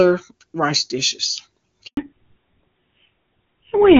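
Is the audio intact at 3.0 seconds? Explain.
No. A fallback to narrowband begins at 1.97 s and runs to the end, so 3.0 s falls inside it. The call drops from a clean HD Voice (AMR wideband) sound, which points to a high rate near 23.85 kbit/s, to a narrowband codec that fits GSM full rate. The narrower channel carries nothing above 4 kHz, so the upper band disappears and the speech sounds duller, boxier and rougher.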